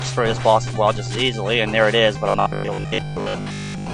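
Robotic sound from repeated short buffers runs from 2.30 s to the end: the audio collapses into a rigid, metallic 50 Hz buzz, most likely because audio arrived too seldom and a 20 ms stretch was replayed in place of most of the real signal.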